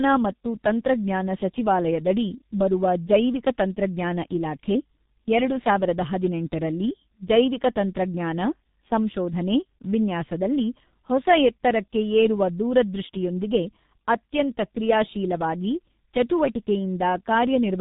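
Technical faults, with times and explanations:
throughout: tandem speech coding. The speech has gone through two speech coders in a row, which fits an ADPCM stage followed by a low-rate G.723.1-type coder. The second coder re-encodes the first one's errors, so the speech sounds rough, muffled and warbly, with nothing above 3.8 kHz.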